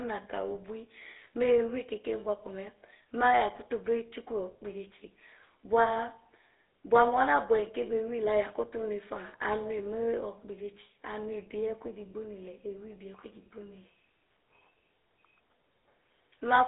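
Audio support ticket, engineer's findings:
GSM full-rate codec artefacts throughout. Buzzy, gravelly roughness on the speech for the whole clip, plainly audible. The vocal-tract model is driven by a sparse, regularly spaced pulse excitation, consistent with 13 kbps full-rate coding. Spectrogram: hard ceiling near 3.8 kHz, no low end below about 300 Hz, smeared harmonics.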